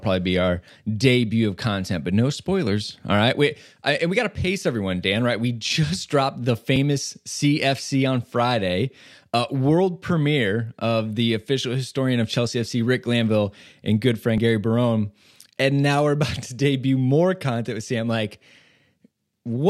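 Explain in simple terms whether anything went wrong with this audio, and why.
Yes, two small things went wrong in this speech. At 6.76 seconds the sound jumps ahead by a tiny sliver. At 14.38 seconds it happens again, with a bigger jump, about three times as long, a few hundredths of a second. The likely cause is a dropped buffer (overrun). The recording program fell behind, and a chunk of sound was overwritten before it was saved. The audio on either side was then stitched together with no gap.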